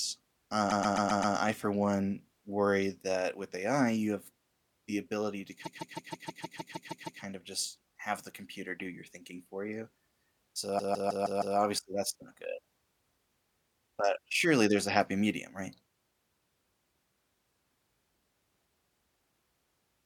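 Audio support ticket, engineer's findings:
Repeated frames, three spots. 0.69–1.35 s: about 0.13 s block stutters five extra times just before "I for one worry", adding 0.65 s. 5.63–7.20 s: about 0.16 s block replays ten extra times after "have the ability to", adding 1.57 s. 10.78–11.56 s: same 0.16 s block, five repeats, right before "that's not good". Probably the encoder or transport writing a run of compressed frames more than once; the decoder replays them.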